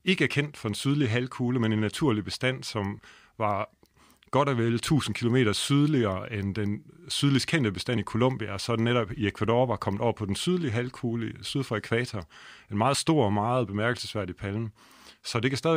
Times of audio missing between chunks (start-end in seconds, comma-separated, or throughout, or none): 7.97, 12.95